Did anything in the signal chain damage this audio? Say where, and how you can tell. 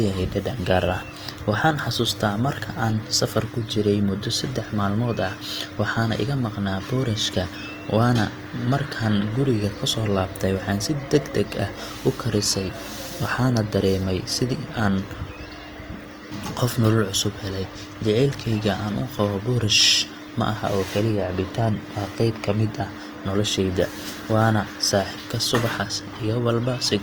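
Yes: the codec stage likely damaged it. Throughout, the speech sounds rough and grainy rather than swirly, with content to 20.1 kHz, pointing to Opus compression in CELT mode at roughly 24 kbps.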